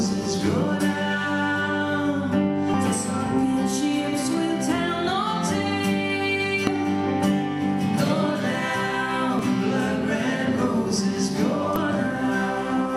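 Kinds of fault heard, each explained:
Damaged data in a compressed stream: corrupted bytes make the decoder misread frames and lose sync. Very brief blips occur at 2.74, 6.67, 9.39 and 11.76 s.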